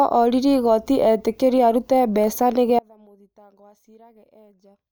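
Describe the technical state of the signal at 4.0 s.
At 4.0 s the speech is gone, replaced by a faint residue of sound sitting roughly 30 dB below the normal level. The loss starts abruptly at 2.79 s and runs to the end of the clip. This is an audio dropout to a faint residue. The wanted signal was likely cut off upstream while the path after the break stayed live, so only faint sound gets through rather than true silence.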